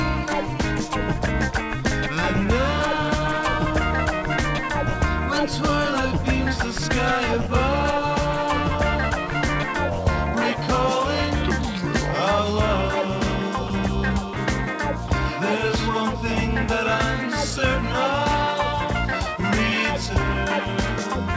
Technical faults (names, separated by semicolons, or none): sound dropped by the voice detector